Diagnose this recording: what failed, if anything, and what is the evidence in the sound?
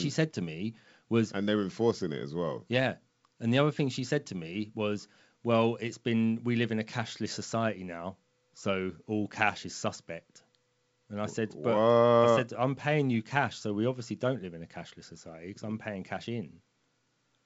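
Nothing has failed: the speech has come through G.722 wideband telephone coding, whose sound fits the full 64 kbit/s mode, with the spectrum ending near 7.7 kHz as that path's band limit dictates and at most faint coding texture.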